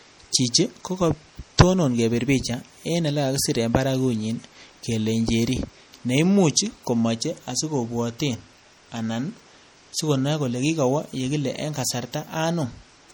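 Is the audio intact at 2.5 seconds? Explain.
No, the speech at 2.5 s carries MP3 compression throughout: watery, swirly artefacts from weak frequency lines toggling between frames, likely from low-bitrate encoding near 48 kbps.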